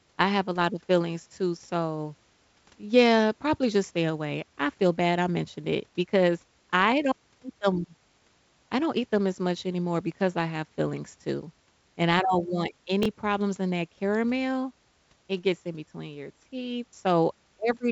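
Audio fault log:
13.03–13.06 s, chunks out of order: just after "and I don't want", a 5.8 ms chunk plays three chunks late, so three hard joins give a brief jumble.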